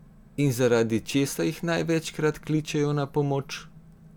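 No technical faults can be heard anywhere in this recording of speech.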